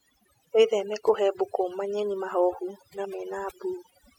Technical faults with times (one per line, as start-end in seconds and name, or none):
0.00-4.18 overdone noise removal